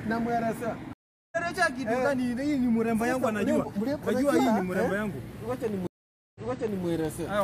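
At 0.93 s the sound drops out for about 0.39 s and comes back roughly 0.3 s further on, skipping material. At 5.87 s a gap of about 0.48 s ends with the audio stepping back 0.51 s and repeating itself. Both are stream reconnects: the connection broke, the player fell silent, then rejoined with a fresh decoder whose first frame fades in, resuming ahead the first time and from a resent burst the second.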